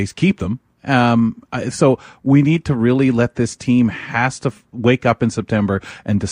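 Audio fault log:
Nothing in this speech recording stands out as a technical problem, so there's nothing to log here.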